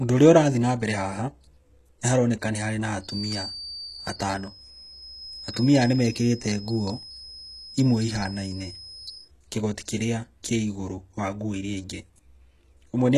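Throughout the speech, plainly audible codec damage and an empty band above 12.3 kHz point to HE-AAC compression, likely at a very low bitrate around 16 kbps. Unlike a plain low-pass, the treble below that limit is rebuilt by copying lower bands upward, so its harmonics don't line up with the real ones.

From 2.99 s to 9.31 s, just after "nĩharoneka nĩ harĩ na", a feedback whistle at 4.7 kHz sits roughly 15 dB under the speech, likely from a speaker-to-microphone loop held at the edge of feedback. It stays at one pitch and never builds into a howl.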